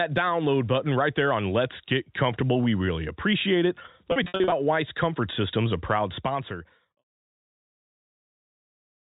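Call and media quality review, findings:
Packet loss with pitch repetition, 4.12 to 4.52 s, right after "really appreciate it". About 220 ms missing across 400 ms, longest gap 60 ms. Buzzy held fragments where the receiver repeats the last pitch period. Gaps fit 20 ms packets.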